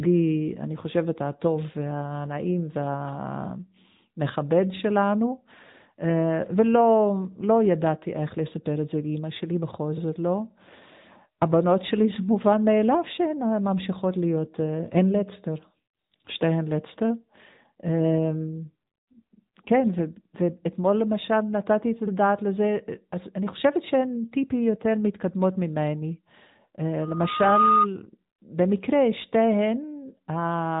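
AMR narrowband mobile codec damage runs through the whole of this speech clip. The audio has been squeezed through a 2G/3G-style speech coder that models the vocal tract and feeds it a handful of pulses each subframe. Nothing above 3.8 kHz survives, and the plainly audible buzzy, synthetic edge fits a mid-range rate of around 10 kbps. Loudspeaker feedback squeal appears from 27.01 to 27.87 s as a single 1.2 kHz tone that swells over roughly half a second to sit a few decibels above the speech. It comes from a microphone picking up the loudspeaker it drives, with loop gain exceeding one at that frequency.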